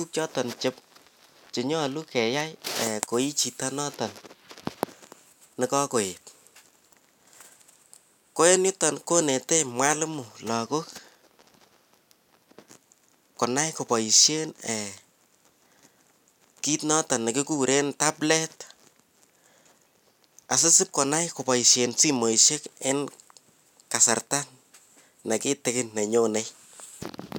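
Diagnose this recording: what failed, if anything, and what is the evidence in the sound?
Nothing in this speech recording points to a failure at any stage of the chain.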